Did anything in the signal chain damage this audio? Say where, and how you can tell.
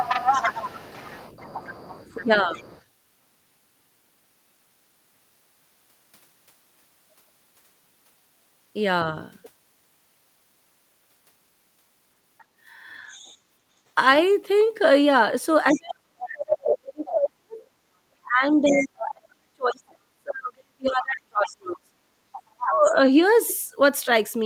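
Yes. The damage points to call processing, likely an echo canceller that failed. A second voice leaks through from the other side at 0.0 to 2.83 s, strong at about 5 dB below the talker. It returns faintly at 12.38 to 13.38 s. It comes back at 15.69 to 17.11 s, 18.64 to 18.86 s and 21.45 to 22.65 s, about 10 to 15 dB down. The far end plays on a loudspeaker, and the microphone picks it up again.

Speech suppressed in double talk is the second fault, again likely from the echo canceller. When both sides talk together, it cannot tell the talker from the echo, so it turns everything down. From 2.16 to 2.57 s the voice dips by roughly 10 dB for about 0.3 s. From 15.72 to 23.06 s it drops much deeper, close to 40 dB, over about five seconds in total. These dips line up with the leaking far-end voice.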